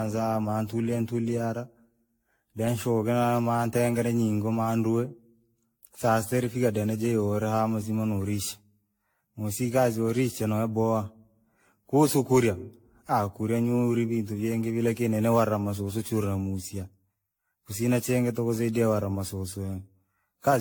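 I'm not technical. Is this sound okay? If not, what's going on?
No. The speech sounds swirly, hollow and smeared throughout. This is generation loss, likely from being compressed and saved again about ten times.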